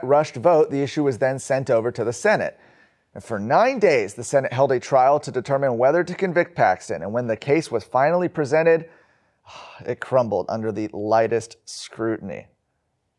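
No technical faults are audible in this speech.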